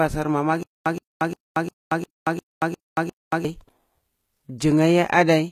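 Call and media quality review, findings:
Treble band plainly damaged throughout. S sounds gritty, metallic or lispy. No content above 14.9 kHz. Likely HE-AAC compression at a low bitrate, around 20 kbps. Upper band rebuilt by spectral band replication, so harmonics misalign across the crossover.

Stutter with silent gaps, 0.63 to 3.45 s. One 123 ms burst repeats 8 times, each followed by 229 ms of silence, every 352 ms. Likely a player or stream stall replaying the last fragment per retry. Audio from that span lost.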